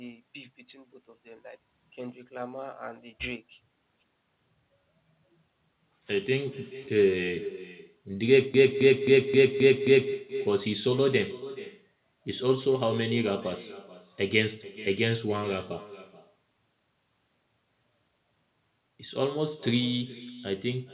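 From the start and all the way through there's echo with no canceller: the far end's speaker is feeding back into its mic, so every phrase returns around 400 ms later as a quieter, thinner copy, about 14 dB down, sitting under the narrowband call audio that stops at 4 kHz.

Then from 8.54 to 10.13 s a broken-record loop kicks in: a 264.9 ms fragment plays six times back to back, likely because the stream stalled and kept resending its last chunk, and whatever should have played there is gone.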